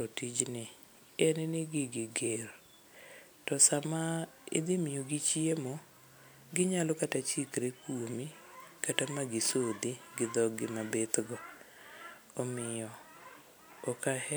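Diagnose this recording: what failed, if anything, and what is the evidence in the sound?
Nothing failed: across the chain from capture through conversion, processing and playback, no stage leaves an audible mark on this speech recording.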